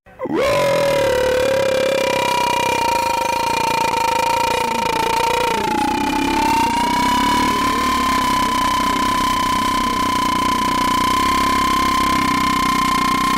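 The clip is a short piece of audio with a single skip ahead between 3.91 and 3.93 s. Playback jumps forward with no silence or fill at the join, so roughly 0.4 s of material is missing and the two sides of the cut butt together almost directly. A stretch of audio was discarded while later audio was already queued, either lost in transit or flushed by an overflowing jitter buffer, which cut playback delay by a similar amount.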